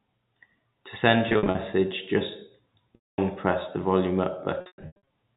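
It's a telephone-band speech clip with packet loss with pitch repetition in three spots: 1.29–1.57 s, 2.95–3.18 s just before "press the volume", and 4.61–5.05 s right after "press the volume". The receiver loops the last pitch period across each gap, so short dropouts sound held and buzzy, while the third, with runs up to 110 ms, fades toward silence.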